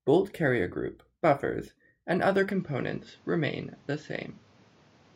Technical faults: input switched to a poorer device

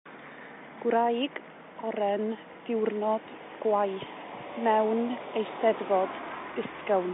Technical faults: none

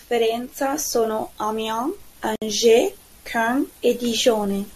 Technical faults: gap at a join of encoded pieces

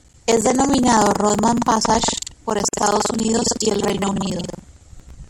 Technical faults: buffer tearing; gap at a join of encoded pieces

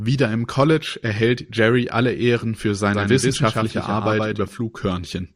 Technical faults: doubled audio track

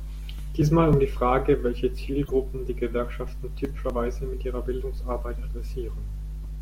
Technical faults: dropped buffer (overrun); corrupt frame decoded

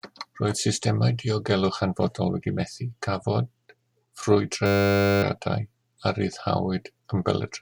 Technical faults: system hang loop

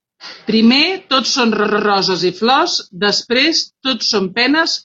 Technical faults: repeated frames

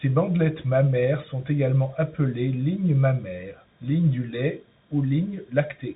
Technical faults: Bluetooth CVSD headset codec

